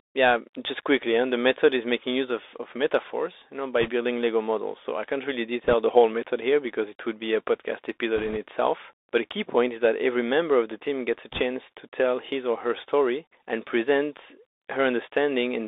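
The whole clip runs through a Bluetooth CVSD headset codec, squeezed into roughly 300 Hz to 3.7 kHz, which fits a 64 kbps CVSD link. The one-bit up-or-down coder can't keep pace with loud high energy, so s sounds go scratchy and a grainy hiss sits under the speech.

On top of that there are four bursts of bit errors on the Bluetooth voice link: 3.81 to 3.90 s, right after "of metaphors you know"; 5.64 to 5.73 s, between "I can't really" and "the whole method here"; 8.17 to 8.37 s, after "would be a podcast"; and 11.32 to 11.42 s. Flipped bits each nudge the waveform only a little and fade out, so you get a brief rushing crackle, not sharp clicks, with error rates somewhere around one to two percent.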